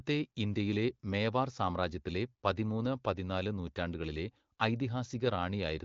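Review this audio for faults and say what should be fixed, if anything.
Nothing needs fixing. The speech carries the band-limited character of the AMR wideband (HD Voice) codec, with nothing above about 7.4 kHz and only light coding texture, which fits one of its higher rates, around 15.85 kbit/s.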